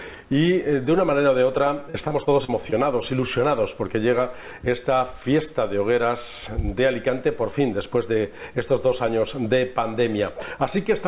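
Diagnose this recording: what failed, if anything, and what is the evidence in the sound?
Repeated packet loss (robotic sound), network stage, 1.9 to 2.74 s: six dropouts, the longest 40 ms, each filled by extending the preceding sound. Concealment covers about 160 ms, roughly a fifth of the span, so the stretch turns choppy within a 4 kHz-limited call band.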